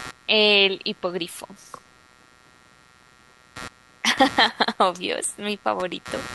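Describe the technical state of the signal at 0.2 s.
Computer activity noise is present at 0.2 s and throughout the clip. It is a buzzing chirp pulsing at around 150 Hz, roughly 20 dB below the speech. Processor or graphics load is shifting the shared ground. Unlike mains hum, the noise follows the machine's workload rather than holding steady.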